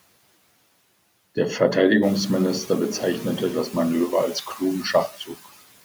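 Throughout the clip, noise suppressor artifacts are present. The suppressor pulls down whatever bands it judges to be steady background, by about 18 dB, frame by frame, so the residue pumps between phrases and swells back under the talker. That modulation follows the speech, which separates it from the room noise itself. The room noise climbs by about 10 dB around 2 s and still sits about 17 dB below the voice.

From 5.08 to 5.47 s the suppressor cuts speech, mistaking parts of it for noise. Scattered pieces adding up to roughly 150 ms are pushed down by as much as about 18 dB along with the background, so those sounds come across as swallowed and faint. This is not a dropout, because the signal never falls to silence or breaks off abruptly.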